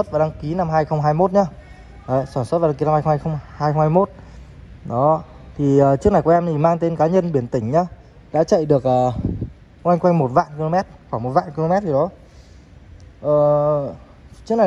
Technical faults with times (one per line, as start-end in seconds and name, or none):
none